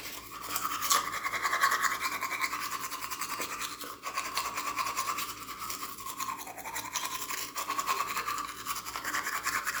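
Nothing stood out on listening to this recording of sounds.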